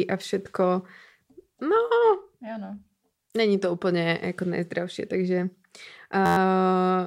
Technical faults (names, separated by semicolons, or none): system hang loop